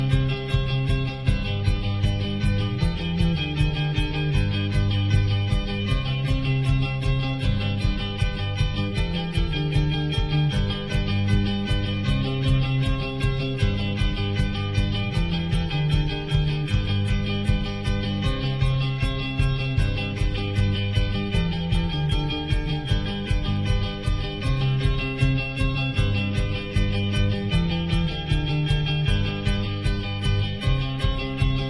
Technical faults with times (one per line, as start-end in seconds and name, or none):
none